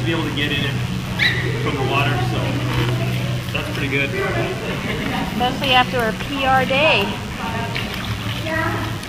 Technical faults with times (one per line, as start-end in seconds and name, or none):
0.00-9.09 DECT cordless phone buzz